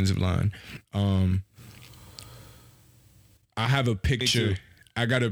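No technical faults can be heard anywhere in this speech recording. There is no moment that calls for a timestamp or an explanation.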